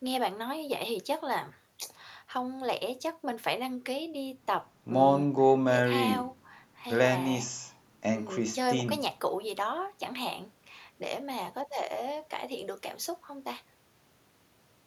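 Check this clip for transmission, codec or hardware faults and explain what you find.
Nothing in the speech points to a transmission, codec or hardware fault.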